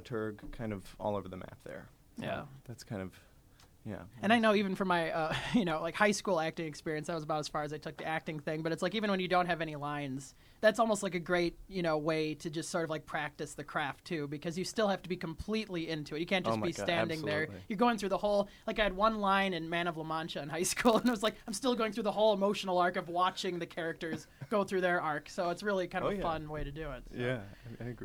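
From 20.81 to 21.62 s there's a block size mismatch, padded: one stage hands over shorter blocks than the next expects, and zeros fill each gap. That chops in a buzz at about 91.5 Hz, and the sound drags to 0.996 speed, timbre unchanged.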